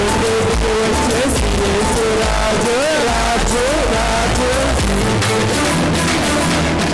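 No technical faults are audible.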